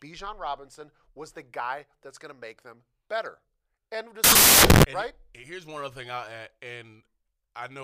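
At 4.24 s the speech gives way to harsh, full-band noise that lasts until 4.84 s, just before "and right here's one". This is samples built from the wrong bytes: each sample was assembled with its bytes misaligned or in the wrong order, so the rapidly changing low-order bits landed in the most significant positions. The result is loud hiss.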